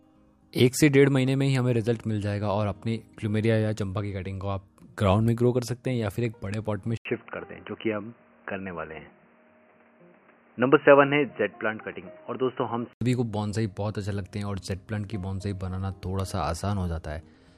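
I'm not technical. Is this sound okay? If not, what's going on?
No. From about 6.97 s to 13.01 s the sound turns dull and boxy, as if heard through a cheap phone, with faint new background noise, then clears up again. Loudness stays the same, and there's a brief gap of about 80 ms at the change. The likely cause is an input switched to a poorer device: the recording jumped to a lower-quality microphone that carries nothing above 3 kHz, then switched back.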